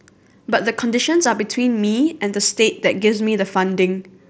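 No technical faults can be heard in this speech, which comes over a Bluetooth mSBC headset link at 61 kbps working as that wideband codec normally does, leaving only its light coding texture.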